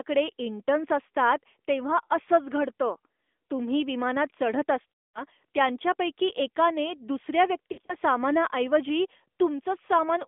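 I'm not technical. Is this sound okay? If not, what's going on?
No. The speech went through an AMR narrowband mobile codec, the phone-network system that squeezes a voice into very little data. It keeps only a slice of the sound, roughly 250 Hz to 3.5 kHz, and rebuilds the voice from a simplified model. That is why the whole clip sounds thin and boxy, like an old phone call, with a plainly buzzy, artificial edge to the speech.

There are also lost AMR speech frames, where pieces of the signal were damaged in transit and the decoder had to guess. From 4.92 to 5.23 s, about a fifth of a second went missing: the voice smears out, fades toward silence, then returns weak and rough. From 7.72 to 7.95 s, shorter scattered losses cause brief dips and warbling.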